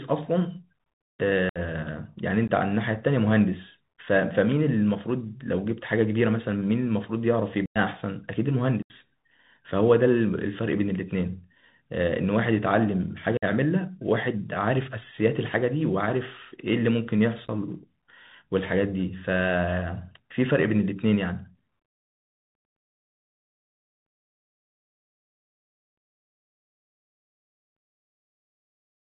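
Throughout the speech, the Bluetooth CVSD headset codec squeezes the signal into a one-bit up-or-down stream at 64 kHz with an adapting step size. A spectrogram shows a hard ceiling at 4 kHz with nothing above it. A fine granular hiss lies under the speech, and s sounds turn scratchy where loud high content outruns the step.

Unconcealed Bluetooth headset packet loss then punches holes at six points:
1.49 s (64 ms)
2.48 s (15 ms)
7.66 s (98 ms)
8.82 s (75 ms)
13.37 s (53 ms)
17.46 s, where 23 ms goes missing in short bursts over 30 ms

Each time, lost link packets were replaced with silence or an idle pattern, leaving short holes with abrupt edges. The level then resumes briefly quieter as the step size recovers.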